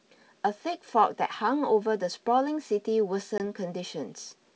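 It's a short speech recording over what sounds like a full-rate G.722 wideband line, clear up to about 7 kHz. The one real problem is packet loss on an ADPCM call, from 3.38 to 3.40 s: roughly one packet's worth, 20 ms, drops out as a hard-edged gap of silence. Since the decoder's predictor and step size lose track of the sender during the gap, the audio comes back slightly distorted before settling within a few tens of milliseconds.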